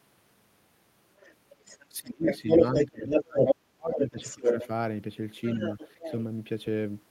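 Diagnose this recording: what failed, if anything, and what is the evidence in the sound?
Other side's voice leaking through at 1.18–1.86, 2.26–3.55, 3.98–4.67 and 5.48–6.23 s, sometimes louder than the speech. Call processing is the likely stage. The echo canceller left loudspeaker echo behind.

Speech suppressed in double talk, 1.97–4.69 s, dropping up to about 35 dB. A brief dip follows at 5.56–5.60 s. The echo canceller likely turned both sides down.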